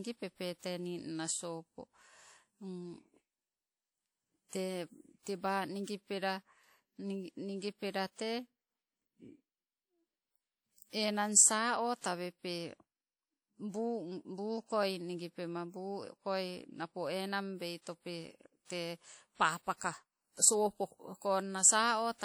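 From start to finish the speech has a ringing, washy quality, with a hiss that swells and fades along with the signal and nothing above about 20.1 kHz. This is likely WMA compression at a rate that fits roughly 48 kbps, where long transform blocks smear quantisation noise around each sound.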